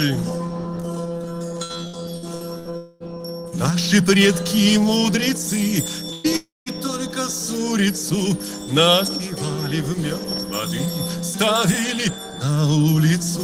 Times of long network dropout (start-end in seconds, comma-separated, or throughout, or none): 2.77-3.03, 6.36-6.69